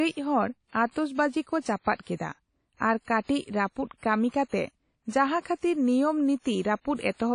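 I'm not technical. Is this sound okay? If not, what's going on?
No. The speech was likely squeezed hard by WMA compression, which throws away fine detail, so it sounds watery and ringing, with hiss that breathes and nothing above about 10 kHz. Around 1.95 to 1.99 seconds there is pre-echo: the compressor smeared its noise backwards, so a short hiss arrives about 46 milliseconds before a sharp sound, which then starts softly.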